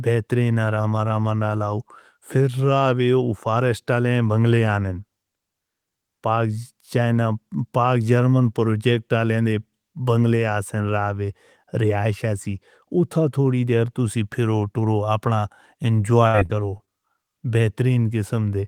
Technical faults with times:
16.27-16.89 repeated packet loss (robotic sound)

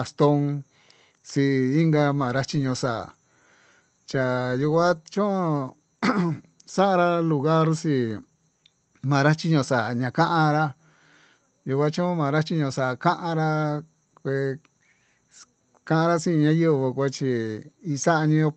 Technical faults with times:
none

